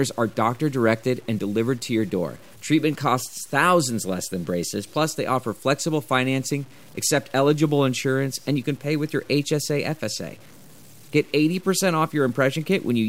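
Throughout, the speech sounds gritty, likely from low bit depth without dither, which fits 8-bit truncation. The waveform looks stepped, with hash tracking voiced spectrogram regions.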